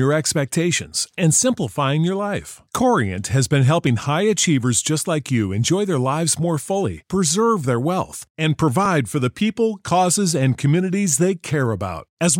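At 3.87 s and again at 8.86 s the speech jumps forward by a small fraction of a second, with no silent gap, which points to audio missing between chunks. The jumps about 5 s apart likely come from a chunked recorder dropping audio at each handover, unlike a dropout, which leaves silence.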